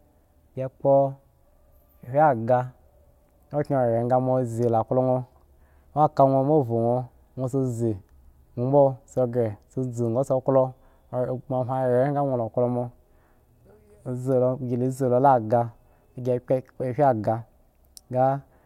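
No technical faults can be heard anywhere in the speech, so there is nothing to describe in time order.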